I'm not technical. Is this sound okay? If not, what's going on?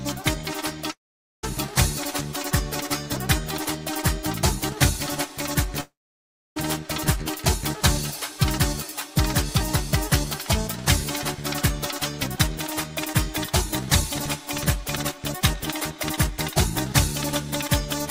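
No. At 0.91 to 1.45 s and again at 5.81 to 6.58 s, the sound fades into a brief buzz, goes quiet, then comes back with a chunk missing. That's likely a long network dropout.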